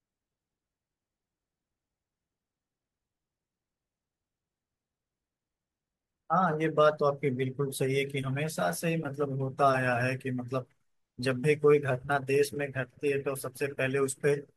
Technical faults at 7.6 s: none

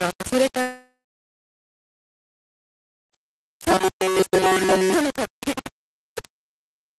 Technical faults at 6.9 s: low bit depth without dither

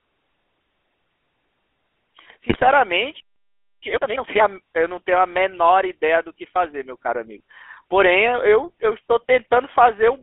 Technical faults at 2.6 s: GSM full-rate codec; GSM bit errors

